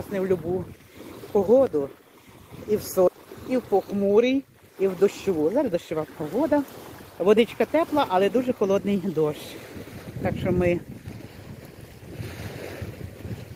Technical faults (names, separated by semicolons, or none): skip ahead; jitter buffer speed-up